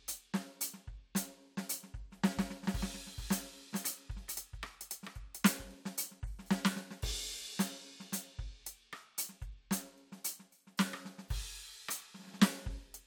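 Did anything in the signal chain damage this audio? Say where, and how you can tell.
Yes. A doubled audio track runs from 2.31 s to 5.75 s. Throughout that stretch, a second copy of the music sits about 0.4 s behind the original, roughly 5 dB quieter and covering the full band, with no decay or room colouring. It starts and stops abruptly at those two points. The likely cause is at the driver or buffer stage: a second, slower capture path feeding the same signal into the mix out of step.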